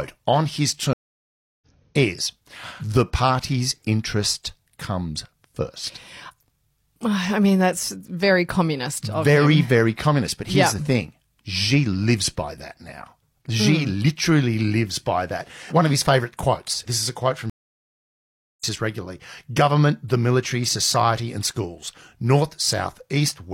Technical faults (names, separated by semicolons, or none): stream reconnect